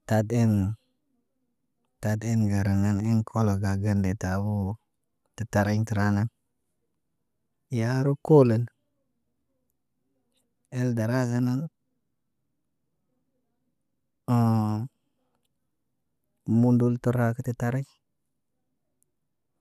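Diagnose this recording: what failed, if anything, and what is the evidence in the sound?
Nothing failed in this recording, and the sound shows no evidence of any fault.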